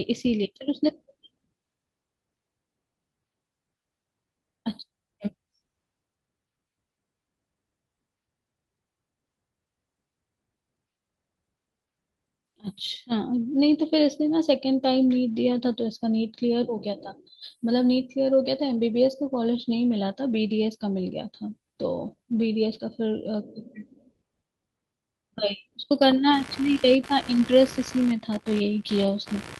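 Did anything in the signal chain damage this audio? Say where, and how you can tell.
Yes, at two stages: the network path and the analogue wiring.

Lost packet rebuilt from error correction (network, recovered in the codec): six short patches of speech turn briefly rough and grainy without any dropout, at 13.77 s, 15.59–15.61 s, 16.99–17.05 s, 21.11–21.13 s, 22.07–22.13 s and 27.29–27.31 s. The 20 ms patches fit one lost packet each, and the 40 ms ones fit two in a row. Opus in-band FEC filled each hole with the low-bitrate redundant copy carried in the following packet, so continuity holds but detail drops.

Computer activity noise (analogue wiring, shared ground): from 26.33 s to the end of the clip, a buzzy pulsing sits under the speech at a rate of around 70 Hz, roughly 20 dB below the speech level. It doesn't follow the speech, which points to current swings from the processor, graphics or peripherals coupling into the audio circuit's ground reference and appearing as interference in the analogue signal.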